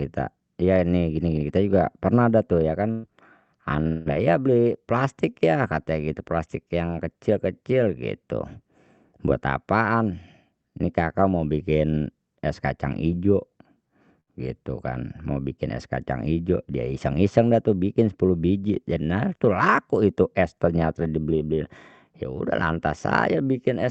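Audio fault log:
2.91 to 3.05 s, burst of packet loss: About 120 ms of audio never arrived in time. The receiver stretched the last sound to fill the gap and faded it down, so a brief buzz or hiss replaces the lost part. The speech then picks up further on.
3.87 to 4.10 s, long network dropout: The sound holds as a fading buzz or hiss for about 180 ms, with no true silence, then resumes slightly further on. This is likely a longer network outage, concealed by continuing the last audio until packets returned.
14.20 to 14.29 s, burst of packet loss: A shorter loss of about 60 ms. The last sound is held and turned down across the hole, giving a quick smeared blip, and the speech continues past the missing piece, with the call codec's high-frequency cut-off near 8 kHz present throughout.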